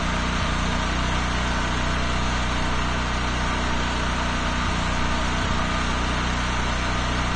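Dull and smeared throughout, with nothing above about 9 kHz and a warbling, fizzy texture on sustained and noisy parts of the sound. That points to AAC compression, likely AAC-LC at a low bitrate around 32 kbps, where the encoder cuts off the top band and quantises coarsely, leaving spectral holes.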